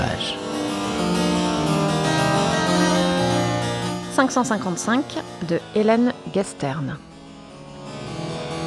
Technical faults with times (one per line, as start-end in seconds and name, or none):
0.00-5.61 wrong sample rate